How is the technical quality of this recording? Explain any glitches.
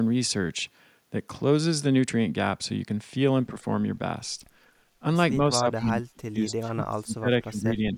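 The recording has two related faults in its final seconds, both typical of a hands-free call where both ends talk at once.

From 5.4 s to the end, the speech shows speech suppressed in double talk. The level dips in pieces, by as much as about 30 dB, for roughly two seconds in total. The likely cause is an echo canceller that could not separate near speech from loudspeaker echo and attenuated both.

Echo leak appears at 5.78 to 5.86 s and 6.49 to 6.53 s. Each is a brief, faint copy of the speech delayed by 239 ms, roughly 25 to 30 dB below it. It is likely residual loudspeaker pickup that the far end's canceller failed to remove and sent back.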